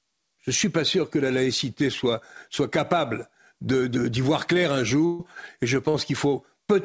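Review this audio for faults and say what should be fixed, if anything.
A burst of packet loss at 5.06 to 5.21 s, just after "de voir clair un", and again at 5.89 to 5.96 s. The last sound is stretched and faded rather than cut to silence, which marks it apart from a plain dropout. About 140 ms and 40 ms of speech are skipped. Nothing above 8 kHz comes through the G.722 call path. A deeper jitter buffer, or redundancy or FEC on the link, would prevent these gaps.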